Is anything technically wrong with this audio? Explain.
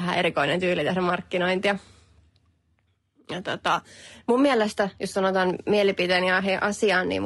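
Yes. Throughout the speech the likely culprit is low-delay AAC compression, with the sound pointing to AAC-ELD at roughly 32 kbps. Its very short frames resolve pitch harmonics coarsely and spread too few bits, so the voice turns plainly rough and grainy, with noise between the harmonics.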